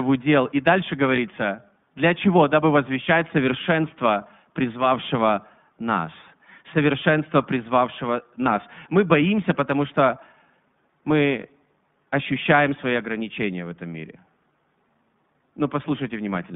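From start to finish, the speech passes through the iLBC codec, a narrowband VoIP coder that rebuilds each 20 ms frame on its own. Its damage is plainly audible: the speech sounds rough and slightly synthetic, with a grainy texture. The line band is limited to about 150 Hz to 3.6 kHz, and the codec runs at 15.2 kbps. On a spectrogram, energy ends at a hard ceiling near 3.6 kHz and is thin below 150 Hz.

At 1.16 to 1.19 s, a lost iLBC frame drops 20 ms of audio. The decoder fills the gap by repeating the last pitch cycle mixed with noise, which sounds like a brief buzzy, held vowel. The same thing happens at 8.44 to 8.47 s, right after "призвавшего нас совершенства призвавшего". In both places the spectrogram shows a short stretch of flat, evenly spaced harmonics with a noisy haze, and the waveform shows a copied periodic segment. Because each frame is coded independently, normal speech returns immediately after both gaps.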